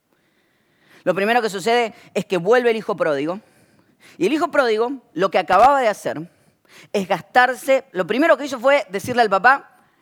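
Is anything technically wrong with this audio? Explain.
Yes, there's one problem. At about 5.53 s, right after "hijo pródigo lo que", you get a short burst of loose connector crackle lasting about 0.13 s, until 5.66 s. That's a worn or dirty contact somewhere in the cable run flickering between connected and open, so the speech gets chopped into fragments and any DC sitting on the line snaps in as little pops. To the ear it's a quick, ragged scratch over the speech.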